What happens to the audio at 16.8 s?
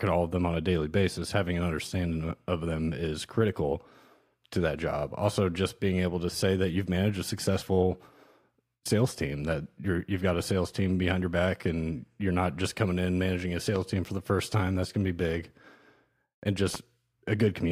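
A loud pop hits from 16.75 to 16.77 s, likely a brief voltage pulse entering the signal path, heard as one sharp click roughly 10 dB above the speech.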